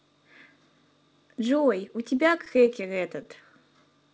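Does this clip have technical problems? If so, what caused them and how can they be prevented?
Yes. Between 1.88 and 3.27 s there are brief ticks and smears, scattered short gaps where about ten lost or late packets, the longest around 15 ms, were patched by continuing the preceding sound. A more stable network path with less packet loss and added forward error correction would prevent this.

From 3.50 to 3.98 s the speech drags at about 88% speed without changing pitch, adding 66 ms. This is a jitter buffer slow-down, with single pitch periods repeated to build up a reserve. Steadier packet arrival or a slightly larger fixed buffer target would avoid these stretches.

The sound stops at 8 kHz, which fits the G.722 call codec.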